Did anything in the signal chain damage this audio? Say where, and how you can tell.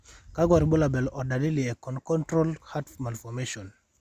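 No, nothing in the speech stood out as damaged by any stage of the chain when I listened.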